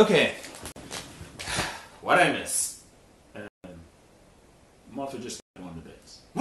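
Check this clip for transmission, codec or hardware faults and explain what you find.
Three blocks of digital silence drop into the audio: 40 ms at 0.72 s, then 160 ms each at 3.48 s and 5.4 s. The output gets zeros instead of signal, so the sound cuts out and back with no fade. The first is a short hole, the later two clear gaps.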